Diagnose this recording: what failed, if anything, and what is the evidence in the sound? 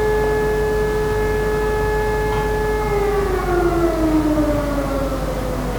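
The codec stage failed: a compressed frame arrived with damaged bits and the decoder played it anyway, a corrupt frame decoded rather than concealed. From 3.29 to 3.35 s a short burst of misplaced energy cuts through the sound, peaking somewhere around -15 dBFS. Its length of about 60 ms suggests roughly three consecutive damaged frames, each decoded with wrong gains or misread spectral codes, so energy lands at frequencies where it doesn't belong and is heard as a brief chirp, squeak, blip or burst of noise.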